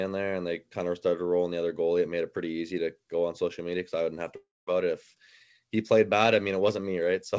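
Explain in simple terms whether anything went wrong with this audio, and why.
A long network dropout, likely lost data, hits at 4.36 to 4.70 s, after "because I wouldn't have". The last sound fades into a buzz, then silence, and a piece never returns.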